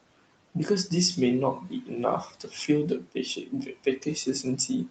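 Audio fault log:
Throughout: noise suppressor artifacts. The room noise, sitting about 19 dB below the speech, gets pulled down by about 19 dB in the gaps, then swells back up under the talking, so the background pumps as the suppressor works frame by frame.
1.61–1.90 s, 2.26–2.69 s, 3.01–3.16 s, 3.36–4.07 s: speech cut by the noise suppressor. In each stretch the suppressor misreads quiet bits of speech as noise and ducks them, about 10 dB in the first two, about 17 to 18 dB in the last two, so syllable edges sound swallowed and faint.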